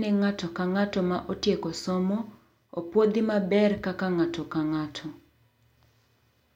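Nothing here calls for comment, as the speech runs without any technical fault anywhere in the recording.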